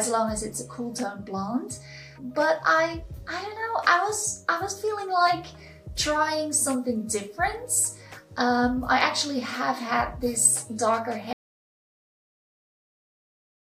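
An audio dropout to silence starts at 11.33 s and lasts to the end of the clip. The sound cuts off mid-flow, and nothing remains after it, not even room tone. The likely cause is a lost input, such as a disconnected device, failed link or stray mute.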